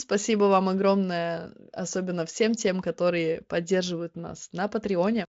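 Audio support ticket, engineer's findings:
No fault found in the speech; the top end stops near 7.6 kHz, consistent with a wideband Speex path at a high quality setting.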